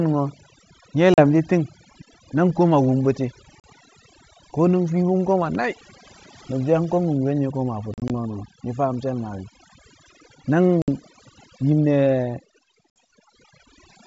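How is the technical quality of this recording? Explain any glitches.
The quality is poor, with two distinct problems.

Overdone noise removal runs through the whole clip. A noise reducer set far too aggressively switches off any frequency band close to its noise estimate, taking quiet speech detail with it. The background drops and breaks up into twinkling artefacts.

Packet loss on an ADPCM call causes five dropouts. Lost packets are filled with silence, and the ADPCM decoder's predictor and step size drift out of step with the sender's. Each hard-edged gap is followed by slightly distorted speech before things settle. The gaps fall at 1.14–1.21 s, 3.60–3.65 s just after "nang koma wum bu̱ti̱", 7.94–8.11 s just after "wumkel nye̱ koma a", 10.82–10.89 s, and 12.90–12.96 s. They range from 40 to 80 ms, about two to four packets each. The third is broken into several short holes across 160 ms. 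The underlying G.722 wideband coding at 64 kbit/s is clear up to around 7 kHz.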